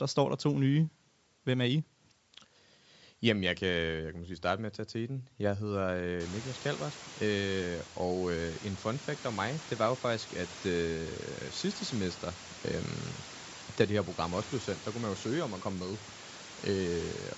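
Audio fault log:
throughout, Bluetooth LC3 compression: the speech has a plainly audible breathy, grainy edge, and its upper range sounds smeared and noise-filled rather than crisp. The likely cause is LC3 coding that discards upper-spectrum detail and fills the gap with noise. The sound fits about 48 kbps with 10 ms frames.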